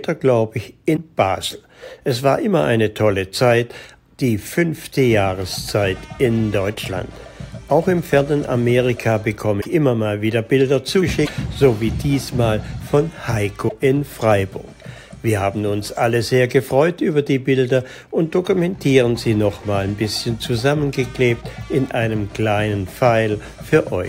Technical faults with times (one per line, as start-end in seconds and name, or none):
0.95-0.98 broken MP3 bit reservoir
9.60-9.66 broken MP3 bit reservoir
11.25-11.29 broken MP3 bit reservoir
13.68-13.72 broken MP3 bit reservoir